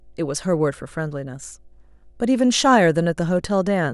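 A speech recording with mains hum running from start to finish: a steady 50 Hz tone sitting roughly 35 dB below the speech, likely leaking in through a ground loop or nearby transformer. A spectrogram shows an unbroken horizontal line at 50 Hz, with low harmonics above.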